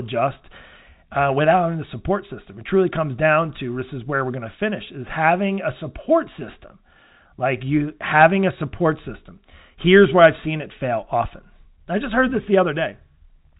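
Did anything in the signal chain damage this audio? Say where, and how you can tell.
No, the chain shows no damage: the audio carries the narrow telephone band of G.711 telephone coding, with nothing above about 3.8 kHz, and any quantisation noise from that stage is faint enough to sit well under the speech.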